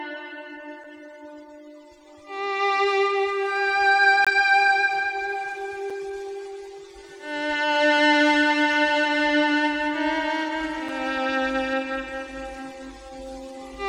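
Blocks of digital silence fall at 0.84 s, 4.25 to 4.27 s, 5.90 s and 10.89 s. Unfilled output buffers, which fits a 256-sample buffer, drop the sound out. The 5 ms gaps are ticks and the 21 ms gap is a brief hole. Unlike a fade-out dropout, the sound stops and restarts abruptly.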